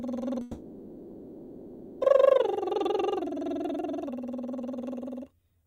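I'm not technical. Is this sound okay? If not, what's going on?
No. From 0.41 to 2.03 s the music turns into a fading buzz, then resumes with that part lost. Likely a long network dropout.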